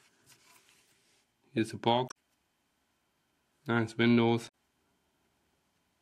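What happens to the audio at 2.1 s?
At 2.05 s the audio is disrupted by damaged data in a compressed stream, lasting until about 2.12 s, roughly 64 ms. Part of the encoded data there is corrupt: bytes lost, zeroed, overwritten or mixed with other data. The decoder misreads or rejects those frames, loses sync and hunts for the next valid frame header. The result is a brief disturbance, such as a chirp, squawk, click or short gap, before normal decoding resumes.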